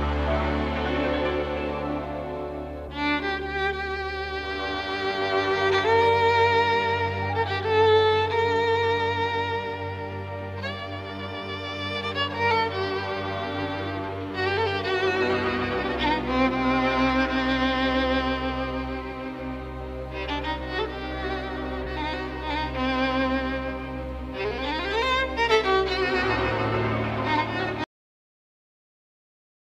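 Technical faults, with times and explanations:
27.84–29.75 s, cut-off end: the final buffers of audio were never written out or played back, so the sound is chopped off mid-event at 27.84 s with no natural decay or fade, and only silence follows until the clip ends.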